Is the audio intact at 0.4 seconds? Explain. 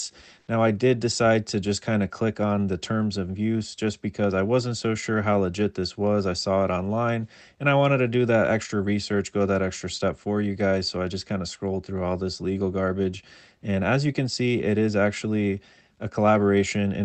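No. From 0.39 to 0.47 s the real background gives way to a steady, featureless hiss about 1 dB different, likely comfort noise from discontinuous transmission, not a silent dropout.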